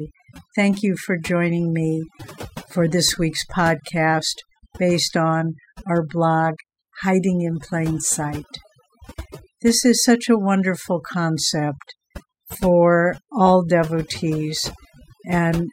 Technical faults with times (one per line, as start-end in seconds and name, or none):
0.00-15.72 overdone noise removal